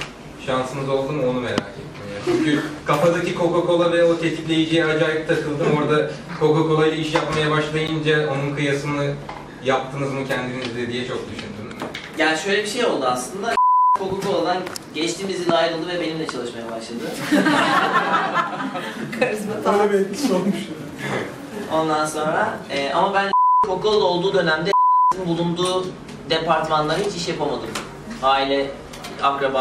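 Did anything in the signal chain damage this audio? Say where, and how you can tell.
Yes: a gap between stream segments at 7.87 s, a playback-stage fault in how a segmented stream is joined. The sound stops dead for about 11 ms and resumes with equally abrupt edges, leaving a hard-edged hole of pure silence. It falls at a join between 6-second segments. The two segments' time stamps don't quite meet, so the player fills the space with silence. Nothing is lost; the hole just adds time.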